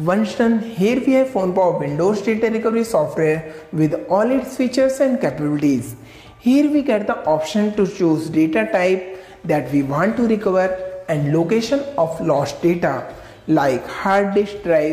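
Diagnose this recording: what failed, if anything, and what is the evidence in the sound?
Nothing in the recording points to a failure at any stage of the chain. There are no events in the sound to attribute to wiring, conversion, buffering, processing, transmission, storage or playback.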